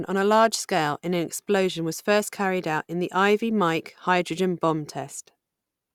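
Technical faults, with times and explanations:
Nothing technical stands out in this bit of speech; there's no fault to point to anywhere in it.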